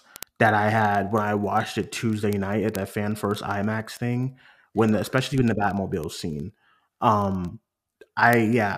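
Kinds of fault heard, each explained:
Word clock ticks: an unlocked receiving clock drops or repeats one sample roughly every 30 ms, giving a steady stream of ticks throughout the speech.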